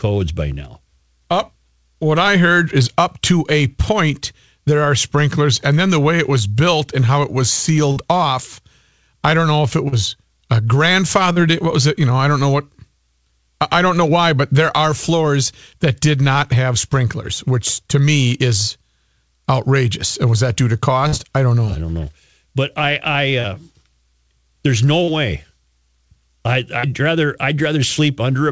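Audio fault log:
7.92, 9.88, 11.32, 21.08, 23.40, 25.04, 26.80 s: short concealed packet loss. About 40 ms missed the decoder each time. The receiver extended the preceding sound, leaving brief smears or wobbles.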